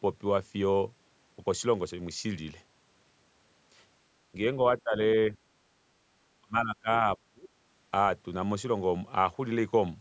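Speech suppressed in double talk is the likely cause of four dips: with both sides talking, the echo canceller mistook this talker for loudspeaker echo and turned the speech down. The voice briefly sags at 4.32 to 4.36 s and 4.84 to 4.94 s, by roughly 10 and 15 dB. It then drops away much harder, around 25 to 30 dB, at 6.41 to 6.89 s and 7.31 to 7.52 s, where it nearly cuts out.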